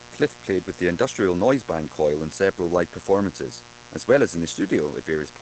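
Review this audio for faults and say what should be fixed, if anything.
Mains buzz runs through the whole clip: a steady, raspy 60 Hz buzz sitting about 20 dB below the speech. Sharp switching spikes twice per mains cycle, from a dimmer, rectifier or missing shield, spread harmonics of 60 Hz well up into the kilohertz range. To prevent it, use shielded, balanced cabling and keep the recording chain away from dimmers and switching power supplies.

Opus voice compression also runs throughout. The speech sounds muffled, slightly hoarse and robotic, and nothing remains above 8.6 kHz. The linear-prediction coder has coded the excitation coarsely and cut the band, which fits SILK wideband operation at a low bitrate near 12 kbps. To prevent it, record or archive losslessly, or give the encoder a substantially higher bitrate.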